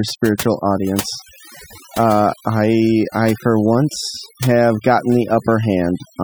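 Speech runs through the whole clip, with overdone noise removal audible from start to finish. A noise reduction stage was set too strong for a noisy recording. Any frequency band that sits near the tool's noise estimate gets pushed far down or switched off. The background sinks and breaks up into twinkling, warbling specks. Quieter parts of the speech fall close to that estimate too, so they are stripped away along with the noise.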